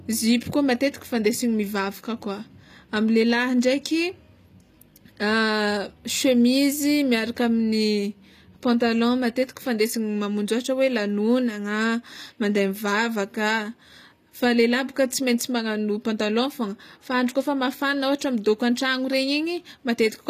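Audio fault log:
Throughout, HE-AAC compression is likely. The speech has plainly audible codec damage. The treble is rebuilt from copied lower bands, so s sounds turn gritty and metallic. Nothing is heard above 14.9 kHz, which fits a low bitrate around 24 kbps.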